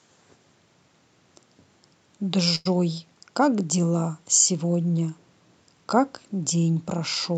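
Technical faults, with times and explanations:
2.55 to 2.68 s: short stall from a late packet. The next piece of speech did not arrive in time, and the jitter buffer ran dry. The receiver held and stretched the last sound for about 99 ms while it waited. Nothing is lost. Playback resumes from the same point, just later, so everything after it runs about 99 ms behind. The held stretch sounds drawn out, with a slight buzz or dip. Across the call path, the audio tops out near 8 kHz.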